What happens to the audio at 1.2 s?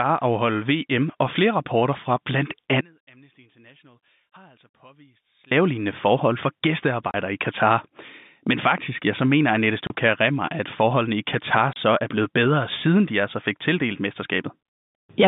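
Nothing goes wrong at 1.2 s: the speech passes through intact there, carrying only the narrow band of G.711 telephone coding, which is working as it should.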